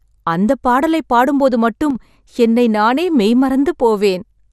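Throughout the recording the speech sounds dull and gurgling, with a granular roughness, which is plainly audible MP2 compression, likely at a low rate around 80 kbps. With too few bits spread across its 32 sub-bands, the encoder shuts off whole upper bands and quantises the rest coarsely. On a spectrogram the top of the spectrum is cut flat and patchy, with high-frequency blocks flickering on and off between frames.

From 1.91 to 1.95 s, just after "அந்தப் பாடலை பாடும் போது" and before "என்னை நானே மெய்", the level abruptly sinks by about 6 dB for roughly 50 ms, then snaps back. This is one channel dropping out, likely a brief loss of one stereo side before the mono sum, so sound common to both channels falls by half. The waveform shows a short, squared-off notch in the envelope with vertical edges, and the spectrogram shows a thin, uniformly dimmer vertical strip.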